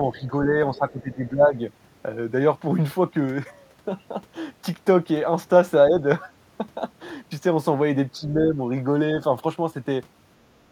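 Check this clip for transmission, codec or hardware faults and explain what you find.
The speech is suppressed in double talk four times: 0.10–0.54 s, 0.71–1.57 s, briefly at 5.89–5.94 s, and 8.13–8.58 s. The level sags by up to roughly 10 dB, likely because an echo canceller turned down near-end speech while the far end talked. The waveform shows envelope dips; the spectrogram shows fading bands.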